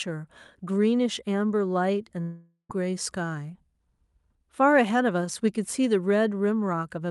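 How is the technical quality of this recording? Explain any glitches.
There's one clear glitch, and it sits on top of a normal call path where the top end stops around 12 kHz.

From 2.21 to 2.71 s the speech breaks off, likely a long network dropout. With no packets arriving, the receiver stretches the last sound into a fading buzz for most of that half-second, then about 80 ms of near silence, before speech resumes with roughly 480 ms missing.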